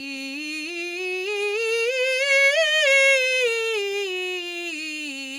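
No technical faults are audible.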